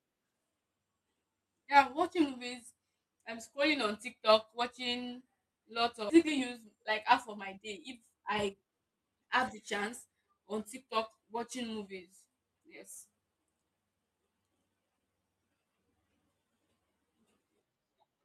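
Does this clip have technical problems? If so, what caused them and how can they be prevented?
Yes. A skip ahead occurred at 6.09 to 6.11 s, just after "watching lots". The receiver discarded about a second of queued audio, so the sound jumps forward with no gap and that stretch is lost. Preventing it means sizing the jitter buffer to absorb bursts and letting it shrink gradually rather than dropping large chunks.

A jitter buffer speed-up follows from 6.16 to 10.88 s, ending before "watching movies". The overfull buffer repeatedly trimmed pitch-period slices, removing roughly 0.7 s, so the audio runs at 112% speed and sounds hurried at unchanged pitch. Keeping network delay steadier and limiting how aggressively the buffer compresses its backlog would prevent this.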